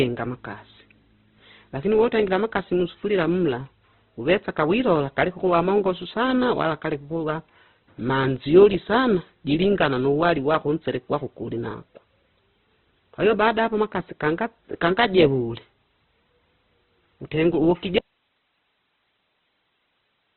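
The clip is speech, muffled and grainy throughout. Nothing is audible above 4.3 kHz, and tones sound rough and noisy, likely from heavy Opus compression at a low rate around 12 kbps. At 17.99 s the speech cuts out abruptly and never returns. Only faint hiss, far below the speech level, remains to the end. This is an audio dropout to a faint residue, likely a lost signal on a path that stayed live.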